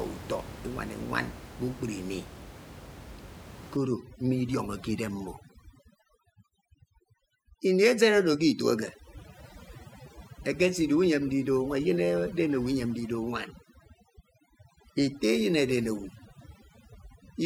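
From 3.77 s to the end, overdone noise removal gates frequency bands near the room-noise floor, about 16 dB down, leaving twinkling specks, unlike steady hiss.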